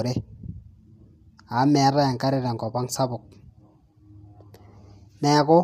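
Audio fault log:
throughout, low-delay AAC compression: the speech sounds plainly rough and grainy, with noise between the pitch harmonics and a dulled, synthetic top band. Unlike long-frame codec damage, this graininess likely comes from AAC-ELD's short frames resolving harmonics poorly, at a rate that fits about 32 kbps.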